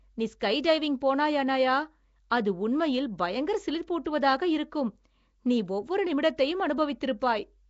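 From start to finish the speech carries a rough, hissy halo and a smeared, underwater blur, with nothing above 7.7 kHz. The likely cause is Nellymoser compression, whose fixed, tight bit budget leaves weak bands empty and fills them with noise, consistent with about 32 kbps.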